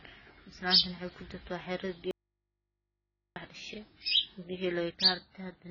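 AAC compression runs through the whole clip, and the speech sounds dull, smeared and warbly. Nothing reaches above 7 kHz, so sibilants lose their crispness and turn fizzy. The heavy damage is likely from AAC-LC at a very low rate, around 16 kbps. At that rate the encoder has too few bits for its 1,024-line frames, so it lowers the cut-off and coarsely quantises or drops whole bands, leaving the spectrum patchy.

An audio dropout to a faint residue runs from 2.11 s to 3.36 s. The speech cuts off abruptly and returns just as suddenly about 1.25 s later. Throughout the gap there is only a low mains hum, roughly 55 dB below the speech level. This is likely a break in the signal feeding a path that stayed live, so the open input's hum carries on where the speech should be. It is not a natural pause or fade.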